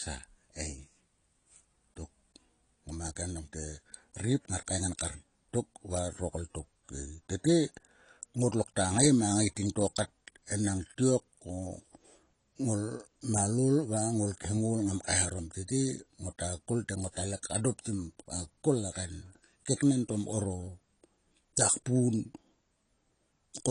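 Throughout the speech, the sound is dull and smeared, with a fizzy, warbling edge on sibilants and nothing above about 10.2 kHz. This is likely AAC compression at a low bitrate, consistent with AAC-LC near 32 kbps, thinning the spectrum.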